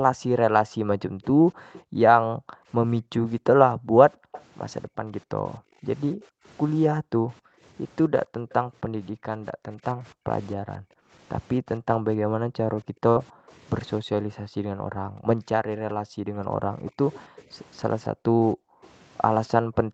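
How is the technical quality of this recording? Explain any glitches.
The recording has three kinds of fault on top of a call path whose sound stops at 8 kHz, with coding texture that suggests Opus at around 32 kbps.

Background gated by the echo canceller: from the start to 11.12 s, and again from 12.17 s to the end, the room tone between phrases sinks sharply, by about 40 dB at its deepest. In the first stretch these dips add up to about five seconds. While the far side is heard on the loudspeaker, the echo canceller clamps the microphone and then releases it. Unlike packet loss, nothing is held or buzzing. The ambience simply goes dead and then returns.

Echo leak: faint delayed copies of the speech appear at 1.73–1.81 s and 4.32–4.43 s, and a longer one runs from 16.86 to 18.89 s. They lag by 261, 265 and 281 ms. The second copy is louder, about 15 dB below the speech, and the other two sit about 25 dB down. 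The likely cause is an echo canceller on a loudspeaker end that left some residue, which was sent back. The steady lag of more than a quarter second separates this from room reverberation, which follows the sound directly.

Burst of packet loss: at 13.09–13.18 s the receiver stretched the last sound for 60 ms while fading it, then jumped ahead, dropping 60 ms of audio. What you hear is a brief held buzz or hiss followed by a skip. Gating silences the background without touching the foreground, but here the speech itself freezes and then leaps forward.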